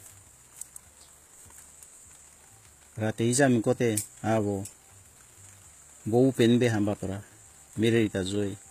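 Throughout the speech, s sounds turn gritty and metallic, likely from HE-AAC compression at a low bitrate around 20 kbps; a spectrogram shows upper bands copied from below, with misaligned harmonics.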